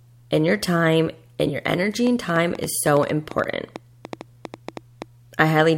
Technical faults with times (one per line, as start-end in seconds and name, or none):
2.07-5.61 train of clicks